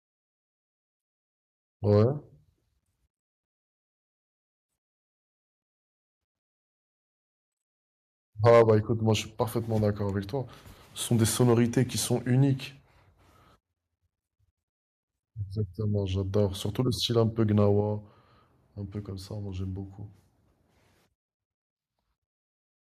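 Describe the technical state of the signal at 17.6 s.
At 17.60 to 17.64 s the speech briefly clips. The peaks run about 1 dB past the converter's limit, and a small fraction of samples lose their tops. The cause is likely microphone overload, with input gain too high for the converter. It adds a short, harsh crackle.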